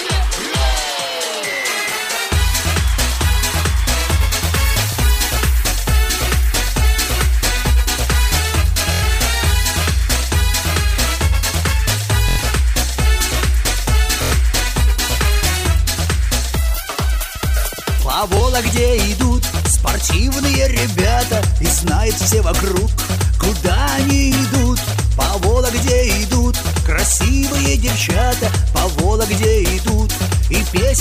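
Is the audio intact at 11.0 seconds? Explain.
Yes, the audio is intact at 11.0 seconds, with no dropout, click, distortion or other fault audible at that moment.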